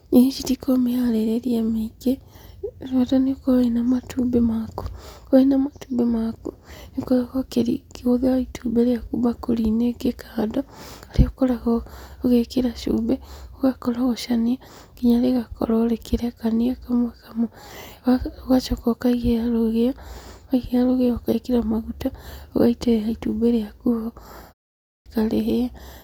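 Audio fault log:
24.76 to 25.06 s, clipped start after a pause: speech bursts in abruptly, its first 0.3 s gone, as the output device wakes from the 0.31 s silence.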